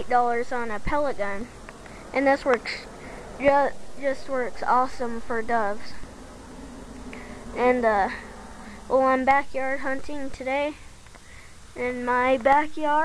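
No technical faults can be heard anywhere in the clip. There is no moment in the audio that needs a timestamp or any further comment.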